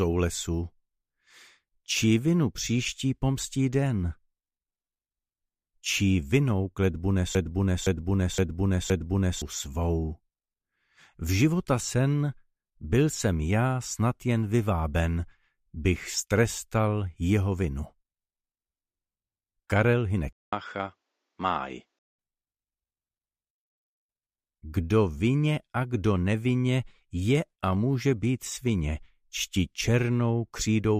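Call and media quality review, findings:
Broken-record loop, 7.35 to 9.42 s: a 0.52 s fragment repeats exactly, back to back, four times. The likely cause is a stalled player or stream resending its last buffered fragment. The audio due in that span is lost.

Input switched to a poorer device, 20.33 to 22.19 s: a 200 ms silence at the switch, then a narrower band with nothing above 7.9 kHz, around 5 dB lower level and a new, faint noise floor. The likely cause is a fallback microphone or headset call profile.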